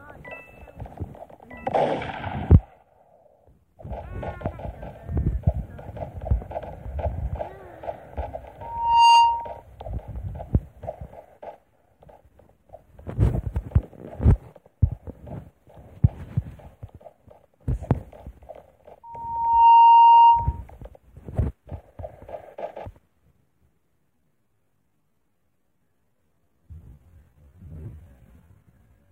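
A steady whistle at 932 Hz swells up and dominates the audio twice, from 8.61 to 9.62 s and from 19.03 to 20.62 s, building in under half a second the first time and around 0.7 s the second, and peaking roughly 15 dB above the sound. This is loudspeaker feedback squeal: a microphone picked up a loudspeaker it was feeding, and at 932 Hz the loop gain exceeded one, so that tone fed on itself. From 24.08 s to the end, the pace drops abruptly to about 0.645 times normal speed while the pitch stays the same. That points to a time-stretched section, most likely software slowing the passage by repeating short overlapping pieces to preserve pitch.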